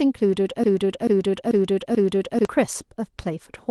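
A lost packet rebuilt from error correction occurs at 1.79 s in this speech. One packet went missing on the call path, but the packet after it carried a reduced, low-bitrate copy of the same stretch. The decoder played that copy in place of the original, so no silence or dropout can be heard. Instead, about 20 ms of the speech comes through rougher and grainier than what surrounds it, a brief smear in texture rather than a break.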